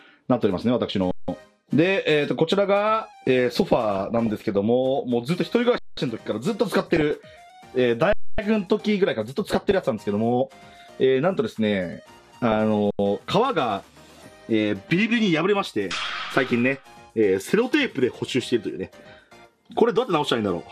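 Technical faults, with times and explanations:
1.11–1.28, 5.78–5.97, 8.13–8.38, 12.91–12.99 s: underrun with held sample. Output starves for 85 to 256 ms and the converter holds a flat level, so the sound freezes, then resumes where it stopped with barely a click.
3.59–4.55, 6.80–7.11, 9.45–9.75, 11.97–12.60 s: DAB burbling. Roughly 0.3 to 0.7 percent of bits arrive corrupted past error correction, so wrong samples put short blips of noise into single sub-bands.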